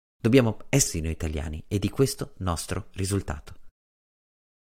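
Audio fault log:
0.86–0.88 s, damaged data in a compressed stream: a short glitch breaks into the speech just before "noi italiani e di", lasting about 20 ms. Corrupted bytes at this point in the coded stream left the decoder unable to read those frames correctly, so it produced garbage output and lost sync, then skipped forward to the next valid frame header.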